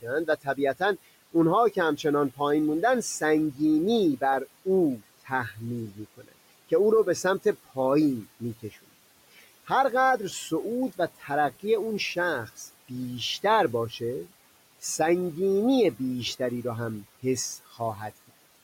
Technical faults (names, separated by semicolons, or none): speech cut by the noise suppressor